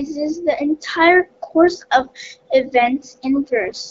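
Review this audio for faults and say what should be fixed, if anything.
Two bursts of AMR bit errors, at 2.02 to 2.10 s right after "the entire course" and again at 3.67 to 3.80 s. The speech keeps roughly its pitch and level but goes hoarse and gargly. That points to flipped bits in the less protected parts of a handful of 20 ms frames, with the later burst sounding heavier. The excitation pulses land in the wrong places and the fine gain and spectral values drift. Improving the radio link quality, or adding stronger channel coding on those bits, would prevent it.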